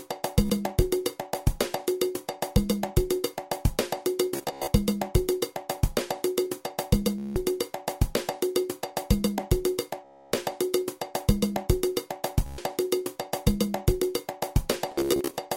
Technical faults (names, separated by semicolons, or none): Bluetooth stutter